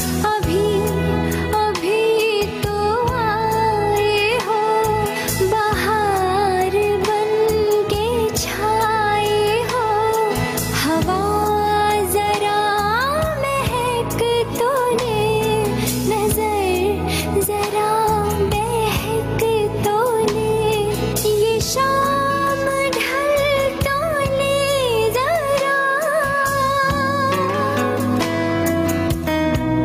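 Throughout, the level pumps, swinging around 10 dB, with loud and soft parts pulled closer together and the sound squashed: gain pumping, likely from gain set too high feeding a fast limiter.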